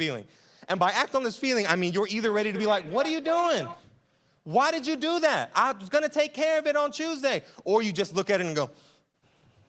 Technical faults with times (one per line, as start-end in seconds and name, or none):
2.21-3.87 feedback echo between two devices